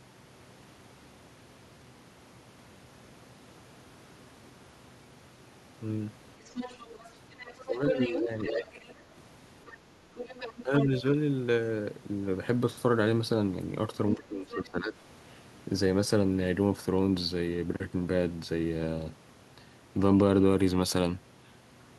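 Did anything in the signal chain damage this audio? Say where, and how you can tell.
Yes. Other side's voice leaking through at 6.45–8.94, 9.66–9.74, 10.15–10.85 and 14.11–14.65 s, likely residual echo from call processing. It appears as overlapping harmonics about 10 to 25 dB below the speech.

Speech suppressed in double talk at 7.64–8.38, 10.63–10.89 and 14.17–14.97 s, likely from the echo canceller. The waveform envelope sags by about 10 to 15 dB while the leaked voice overlaps.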